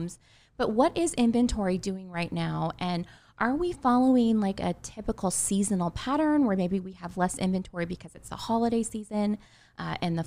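Nothing in the speech recording registers as a technical fault.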